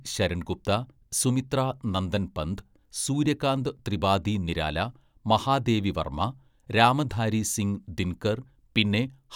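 No technical faults are audible.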